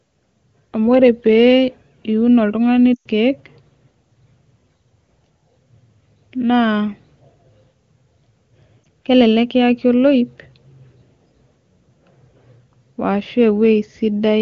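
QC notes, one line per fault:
2.94–3.07 s, lost AMR speech frames: a 120 ms run drops the sound to near silence within two frames as the wideband decoder ramps down gain on guessed frames.
8.84 s, lost AMR speech frames: one dropped 20 ms frame, a brief dip just before "kelelek kiyaki", then the wideband speech resumes, weak or rough for a moment.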